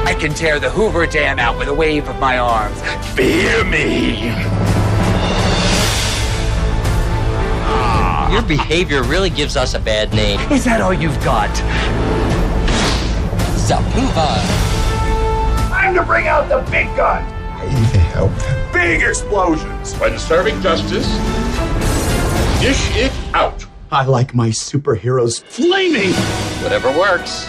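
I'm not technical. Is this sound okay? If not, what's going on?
Yes, nothing in this sound stood out as a problem when I listened to it.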